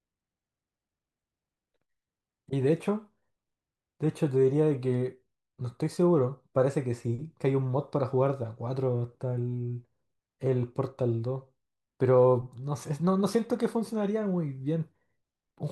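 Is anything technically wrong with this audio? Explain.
No, nothing stood out as technically wrong on listening to this speech recording.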